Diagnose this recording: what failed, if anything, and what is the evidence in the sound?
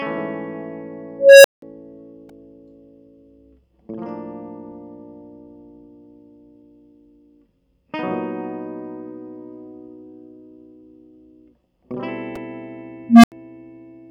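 Unstable filter at 1.19 to 1.62 s and again at 13.09 to 13.32 s, in the digital processing stage. In the music, a tone near 500 Hz swells over about 0.25 s, clips, then drops to about 0.18 s of silence. The second event is a lower tone near 200 Hz that builds over 0.15 s and then goes silent for 0.08 s. A recursive filter with bad coefficients feeds its own output back with gain, so the tone runs away until the numbers overflow and the filter resets.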